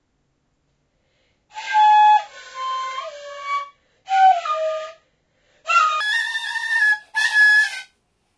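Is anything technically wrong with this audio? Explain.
Yes. From 6.00 s to the end at 8.37 s, a wrong sample rate fault occurs. The sound is played without conversion about 1.38 times too fast. That fits 16 kHz audio run at 22 kHz. Pitch rises about 5.6 semitones, and everything sounds high and hurried.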